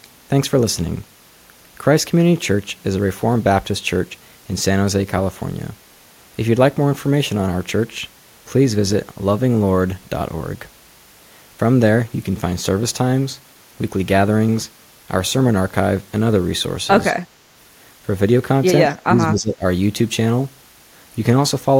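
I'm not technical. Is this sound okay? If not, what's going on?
No. From 18.9 to 19.6 seconds the speech suddenly drops way down. That's speech suppressed in double talk, likely an echo canceller turning the speech down while both sides were talking at once.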